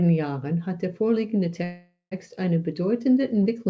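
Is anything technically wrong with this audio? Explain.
Yes. From 1.64 to 2.13 s the speech stops and its last sound stretches into a fading buzz that ends in about 0.1 s of silence. This is a call audio freeze, likely from packets stalling until the jitter buffer ran dry. Speech then resumes where it paused, nothing lost but everything after arriving about half a second later. Nothing is heard above 8 kHz, which fits a G.722 call codec.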